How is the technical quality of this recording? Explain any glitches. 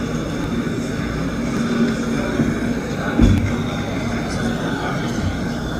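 The recording has four short skips. At 0.44, 1.57, 3.38 and 4.57 s, the audio jumps ahead without any gap. The likely cause is a dropped buffer (overrun): samples were overwritten before being read. About 10 ms is lost at each of the first three, and about 40 ms at 4.57 s.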